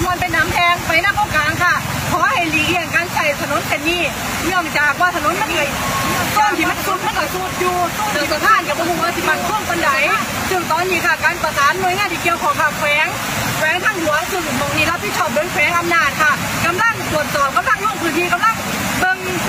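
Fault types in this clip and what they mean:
Doubled audio track: The same sound plays twice, with a copy trailing about a second and a half behind. The copy is about 5 dB quieter, full-band and dry. It appears abruptly at 5.36 s and cuts off at 10.24 s, likely from a slower second capture path.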